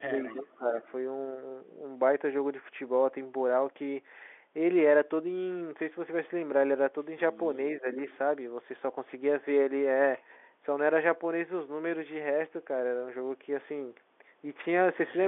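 Right at the start, from 0.07 to 0.76 s, the speech gets pushed down by around 20 dB at worst, about half a second of it in all. That's likely speech suppressed in double talk: both ends were talking, and the echo canceller, unable to separate this talker from the loudspeaker echo, ducked everything. At 0.26 to 0.41 s, a faint copy of the voice trails in roughly 25 dB down and 356 ms late. That's an echo leak, likely a canceller letting loudspeaker pickup slip back. Another, quieter scrap, about 35 dB under, shows up at 0.87 to 0.91 s. At 7.8 to 7.98 s there's a shorter dip of about 10 dB, around a tenth of a second, the same suppression pattern again. Then at 8.1 to 8.18 s a brief echo leak returns at the same 356 ms delay, roughly 30 dB below the speech. All of it sits inside the usual 300 to 3500 Hz telephone band of the G.711 mu-law line.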